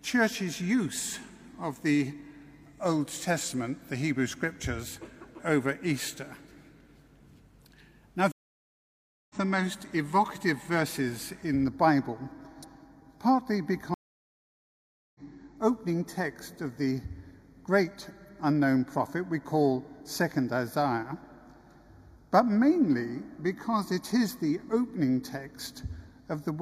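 The audio drops out twice, from 8.32 to 9.36 s (980 ms of silence) and from 13.94 to 15.20 s (1207 ms), each time resuming roughly a second and roughly 0.7 s further on. These are stream reconnects, where the player re-joins a live stream with a fresh decoder. From 11.64 s to the end the sound turns hollow and phasey, with a notch near 3 kHz. This is channel delay (comb filtering), where one channel lags by roughly 0.2 ms before the two are summed to mono.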